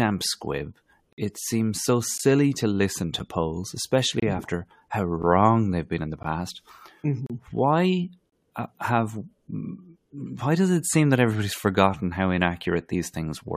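Hard-edged holes of silence cut the speech at 1.13–1.18 s, 2.18 s (after "squib it seems so"), 4.20–4.22 s, 5.22 s, 6.23 s, 7.26–7.30 s and 8.30–8.32 s, spaced about a second apart. These are gaps between stream segments: mismatched timestamps on 1-second segments leave 10–50 ms holes that the player fills with silence, with no audio lost.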